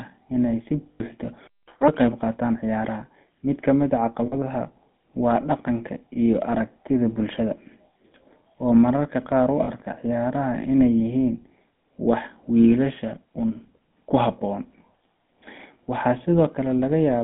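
Throughout, the speech passes through what sounds like the GSM full-rate codec at 13 kbps, which rebuilds the vocal tract from a coarse model driven by sparse pulses. The result is a plainly audible buzzy, gravelly roughness in a band of about 150 Hz to 3.5 kHz.

At 0.92 to 1.01 s, lost GSM frames were filled by repeating the last good frame. This leaves an 80 ms rough, metallic ringing hold in place of the sound. The same fault returns at 4.26 to 4.35 s for 60 ms and at 9.64 to 9.70 s for 40 ms.

From 1.47 to 1.68 s the audio cuts out mid-flow for about 200 ms and then resumes. This playback stall was likely caused by the player running out of data or its output thread being blocked, leaving plain silence until it recovered.

Right after, from 1.68 to 1.88 s, the player catches up at higher speed by resampling its backlog at twice normal rate. Speed and pitch both jump, roughly ten semitones up, giving a brief chipmunk-like rush.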